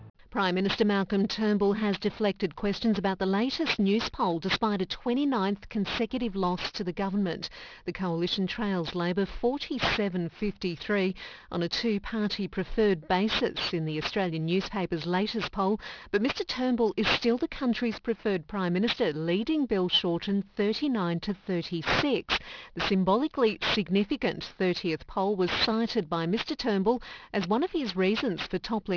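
Aliasing runs throughout. Content above 5.5 kHz folds back as harsh, unrelated tones, fairly loud. This points to downsampling to about 11 kHz without filtering first.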